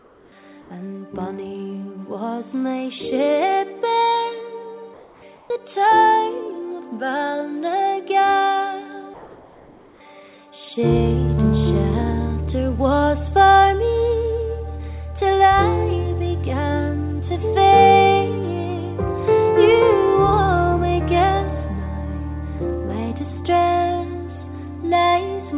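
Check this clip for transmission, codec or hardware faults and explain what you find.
One fault recurs: comfort noise in place of the background, at 0–0.32 s, 0.62–0.7 s, 4.94–5.22 s, 5.36–5.5 s and 9.14–10.0 s. During quiet stretches the sender likely stopped transmitting, and the receiver filled in synthetic noise. The background, about 30 dB below the loud passages, turns steady and featureless, up to about 2 dB quieter. Unlike a dropout, these gaps never fall silent. Throughout, the call path's band limit leaves nothing above 4 kHz.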